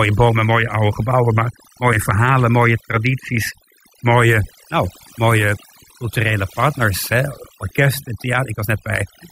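From start to finish the speech carries overdone noise removal: an overly aggressive noise reducer has cut individual frequency bands near its noise estimate, taking quiet speech detail with them. The background drops away, sprinkled with twinkling specks. A noise gate would mute everything at once; here bands vanish separately.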